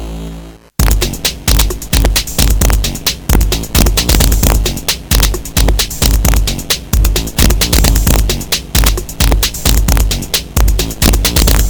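Violent, sharp cracks burst out of the loudest moments across the whole clip, far harsher than ordinary clipping. This is integer overflow. The level was pushed about 4 dB past the largest value the integer format can hold, and instead of being limited, each overshooting peak wrapped around to the opposite sign, swinging across the full range in a single step. Only a small fraction of samples, under one percent, go over, so the cracks land on the peaks.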